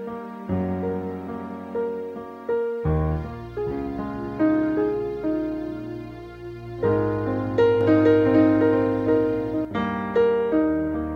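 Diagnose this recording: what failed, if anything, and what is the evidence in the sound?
From 7.81 to 9.65 s there's a doubled audio track. A second full-band copy trails the sound by roughly half a second, about 5 dB down, dry, and it cuts in and out abruptly. Likely a driver or buffer stage mixing in a slower second capture path.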